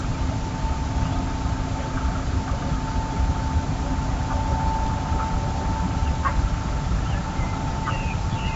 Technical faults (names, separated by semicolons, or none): none